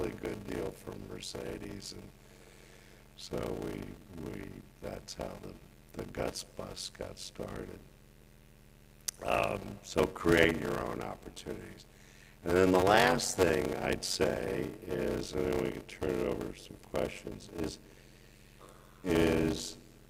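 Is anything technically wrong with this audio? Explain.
Yes. A block size mismatch (padded) runs throughout. Short blocks, zero-filled to what fits a 512-sample read, cause a 93.8 Hz buzz and 0.625× speed.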